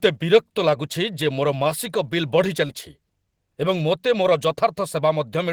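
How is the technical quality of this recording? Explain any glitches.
There's one glitch worth flagging: a short concealed packet loss at about 2.67 to 2.71 s. Roughly 20 ms of the speech never arrived at the decoder in time, so the receiver patched the hole by extending what came just before it, carrying on the pitch if the sound was voiced or using shaped noise if it wasn't. About 14 ms of that is synthesized fill, which is then crossfaded back into the real signal. You hear it as a quick smear or tiny wobble, and a short consonant there could get swallowed.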